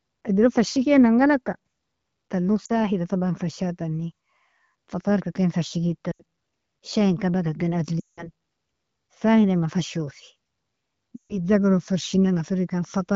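Four dropouts from lost AMR speech frames show up at 2.65, 6.11, 8.00 and 11.16 s. Radio errors corrupted the frames, so the decoder kept repeating the last good pitch and vocal tract settings at falling gain. The 40 ms gap at 2.65 s drops to near silence within its two frames. At 6.11 s, about 80 ms drops out. The 180 ms run at 8.00 s and the 140 ms one at 11.16 s drop to near silence within two frames, then the speech comes back rough for a moment. The light wideband coding around them fits the 12.65 kbit/s mode.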